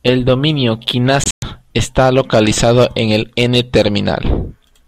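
From 1.24 to 1.42 s, the speech breaks into silent holes, the longest 116 ms, then resumes further on. Likely cause: a Bluetooth dropout.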